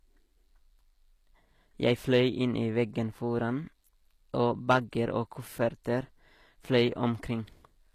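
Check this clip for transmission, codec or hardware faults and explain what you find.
Two faults are present: codec damage across the whole clip and brief hard clipping in three places.

The whole clip carries plainly audible codec damage, likely from HE-AAC compression. Nothing is present above 14.9 kHz. The upper band sounds bright but synthetic. That is spectral band replication at work: the coder keeps only the lower spectrum and copies it upward under a coarse envelope. Rebuilt harmonics do not match the real ones. S sounds come out gritty and lispy. The degree of damage points to a low bitrate, around 24 kbps.

Hard clipping occurs three times: 1.87 to 2.21 s, just before "inn i veggen foran", then 4.70 to 4.77 s, and 6.74 to 6.82 s. Peaks exceeded the stage's limit and were sliced flat. The overload is about 2 dB at the first and third events, and about 6 dB at the second. Flat tops add high harmonics. 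The result is crackle on loud peaks, harshest at 4.7 s.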